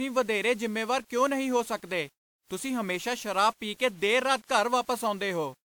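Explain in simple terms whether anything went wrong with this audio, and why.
Two things went wrong, and both last the whole recording of speech.

The first is low bit depth without dither. The speech has a gritty, grainy roughness that rises and falls with the voice itself, and the quietest moments crumble or sputter instead of fading smoothly. The likely cause is that the audio was stored with very few volume steps, which points to about 8-bit audio, and rounded off with no masking noise. Ordinary background hiss stays steady, but this grit changes with the sound.

The second is generation loss. On top of the grit, the speech sounds swirly, hollow and smeared, as if heard through water, and the starts of sounds are blurred rather than crisp. This is likely from being squeezed by a lossy format, apparently WMA, and then unpacked and re-squeezed several times over. Each pass adds fresh damage that piles up, which makes it sound worse than a single round of compression would.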